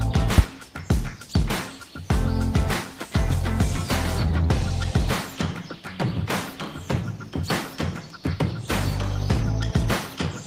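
Nothing goes wrong anywhere in this audio, so there's no technical fault to point out.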